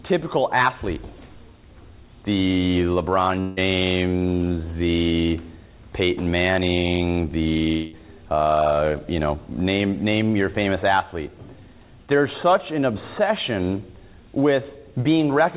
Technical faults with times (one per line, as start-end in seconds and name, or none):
3.40-3.59 long network dropout
7.73-7.94 long network dropout